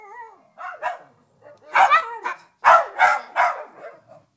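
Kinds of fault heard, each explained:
Short concealed packet loss: two small chunks of audio never reached the decoder in time, so the receiver stretched the preceding sound over each gap and blended back. You hear a brief smear from 2.00 to 2.03 s and a shorter one near 3.06 s.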